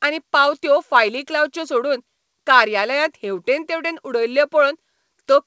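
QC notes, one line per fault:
No fault to log in this speech; the call path carries it as expected, with nothing above 8 kHz.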